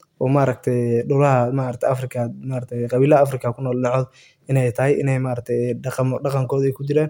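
Listening to the speech recording, nothing stood out as a technical problem at any point.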